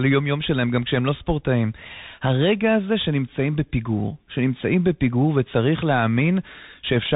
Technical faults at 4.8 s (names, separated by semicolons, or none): Bluetooth CVSD headset codec